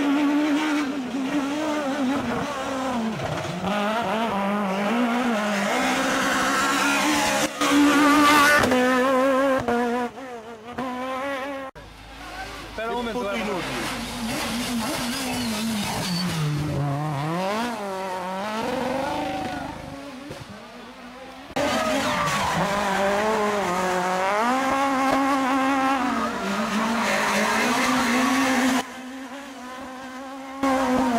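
At 7.46 s and 28.81 s, the level drops abruptly, about 12 dB then about 15 dB, with the noise floor falling too. A sudden gain jump, likely from an unramped gain change.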